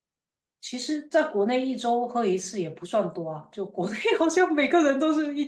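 No technical faults are audible in this speech; it has simply passed through a WebRTC call path, where the Opus coding leaves its usual light texture and the top end stops near 12 kHz.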